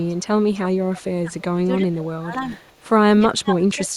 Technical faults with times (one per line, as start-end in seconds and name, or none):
0.00-0.23 echo leak
0.54-0.60 echo leak
0.92-2.60 speech suppressed in double talk
0.96-1.01 echo leak
2.67-2.85 echo leak
3.29-3.90 speech suppressed in double talk